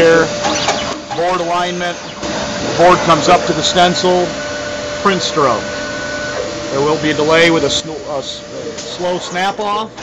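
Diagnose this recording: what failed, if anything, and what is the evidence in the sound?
The level drops abruptly by about 8 dB, background included, from 0.93 to 2.23 s and again from 7.80 s to the end, likely a sudden gain jump from an unramped digital gain change.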